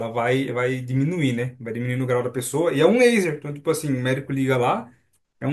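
No technical faults can be heard at any point in the speech.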